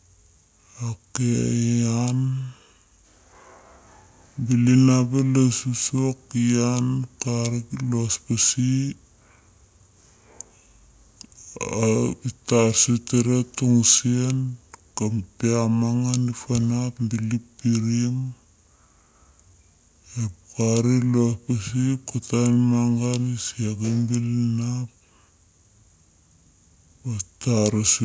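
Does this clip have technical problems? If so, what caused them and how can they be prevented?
Yes, wrong sample rate throughout: the speech runs at two-thirds speed and about 7 semitones low, which fits 24 kHz audio played at 16 kHz. Check the file's rate and resample before playback.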